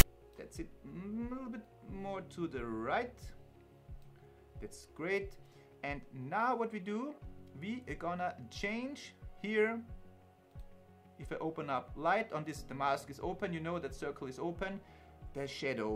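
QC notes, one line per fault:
0.00 s: file tags played as audio. The clip opens with a very short, loud rasp that starts and stops with hard edges and sits off centre, pushed to one side. It lasts only about 13 ms, so it reads as a harsh tick of static. A block of text tags at the head of the file has been decoded as if it were sample data. Character bytes make rough, lopsided values, which gives that offset buzz instead of true sound.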